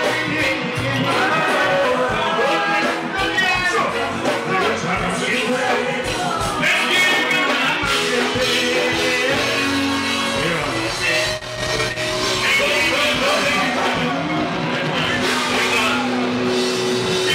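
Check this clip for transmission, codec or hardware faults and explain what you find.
Compressed frames were skipped at 1.84 s and 4.6 s. Whole codec frames never reached playback, so the audio jumps ahead: roughly 100 ms at 1.84 s, which fits about five 23.2 ms frames, and about one frame at 4.6 s.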